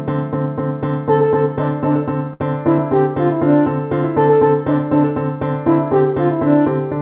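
At 2.33 to 2.43 s the sound hangs with a faint buzz or dip: a short stall from a late packet, where the empty jitter buffer stretched about 67 ms and then resumed.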